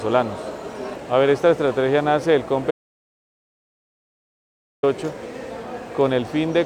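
An audio dropout to silence runs from 2.71 s to 4.83 s: 2.12 s of silence without room tone, likely from a lost input writing silence.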